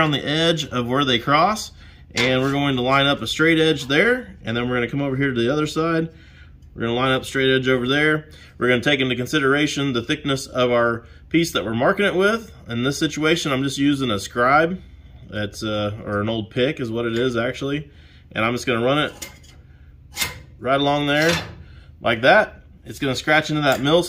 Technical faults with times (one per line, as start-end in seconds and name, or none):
none